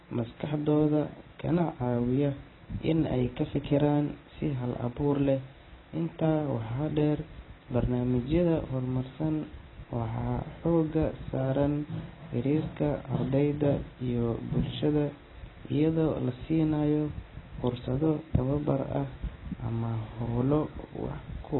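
From start to finish the speech sounds dull and smeared, with a watery warble on sustained sounds, likely from heavy AAC compression at a bitrate as low as 16 kbps. A spectrogram shows a hard ceiling at 4 kHz.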